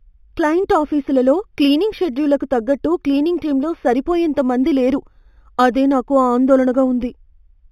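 A faint metallic shimmer rides on the sibilants of this speech from start to finish, over a dulled top end. This is imaging from linear upsampling. The straight-line interpolation leaves a mirrored copy of the spectrum at 4 to 8 kHz, roughly 30 dB down, which fits an 8 kHz source raised to 44.1 kHz.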